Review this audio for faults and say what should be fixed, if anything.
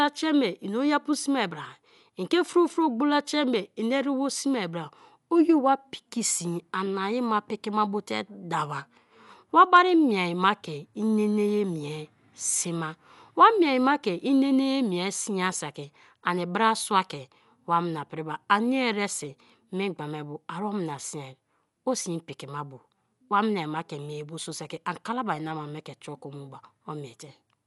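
The speech carries plainly audible codec damage from start to finish, likely from Dolby Digital compression at a starved bitrate, around 64 kbps by the sound of it. Nothing remains above 11.4 kHz, so it sounds dull, and the encoder has left many frequency lines without bits, which the decoder fills with dither noise. That gives a rough, fluttering grain around tonal parts. A plain low-pass filter would sound dull but stay clean, and an MP3 encode tends toward swirly, watery artefacts rather than this noisy roughness. Encode from the original at a higher Dolby Digital bitrate, or use a less lossy format, so the full band and clean tones survive.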